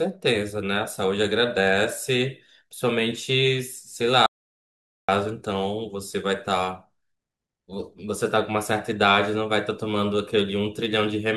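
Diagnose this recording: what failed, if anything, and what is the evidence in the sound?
Audio dropout to silence from 4.26 to 5.08 s. The speech cuts to silence, with no room tone, for 0.82 s. The likely cause is a lost input link while recording continued.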